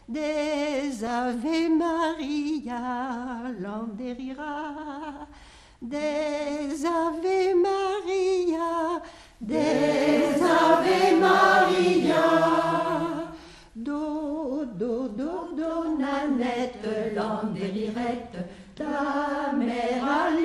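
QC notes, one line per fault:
Throughout: dull, gurgling, granular sound with flickering upper bands, likely MP2 compression, with too few bits for the sub-bands, fitting an 80 kbps stream.
1.00 to 1.11 s and 17.97 s: DAB burbling, where bit errors slipped past error correction and corrupted sub-band samples, causing brief blips of noise in single sub-bands.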